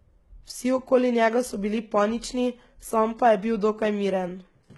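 From start to finish the speech carries heavy codec damage of the kind that points to HE-AAC compression, likely HE-AAC v2 at a rate that fits roughly 16 kbps. Nothing sounds above 11.8 kHz, yet the treble below that stays bright rather than dull. That treble is rebuilt from copied lower bands, so s sounds come out gritty and metallic. A plain low-bitrate codec would instead muffle the top or leave swirling holes.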